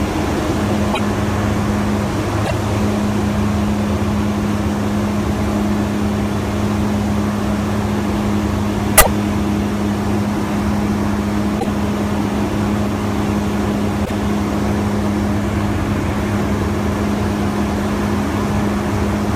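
Five short bursts of damaged data in the compressed stream turn up, at 0.90 to 1.00 s, 2.42 to 2.51 s, 8.98 to 9.07 s, 11.56 to 11.66 s and 14.02 to 14.11 s, each lasting roughly a tenth of a second. At each spot the decoder hits corrupted bytes, misreads the frames there and loses sync until it finds the next valid frame header. You hear that as a quick chirpy squawk or blip cutting into the sound.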